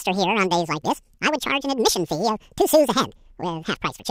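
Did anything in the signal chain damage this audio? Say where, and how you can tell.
Yes. At the sample-format conversion stage, the audio was read two samples at a time (double speed). The whole speech clip plays twice as fast and an octave higher. Unlike a sample-rate mismatch, every other sample is skipped, so high frequencies fold back.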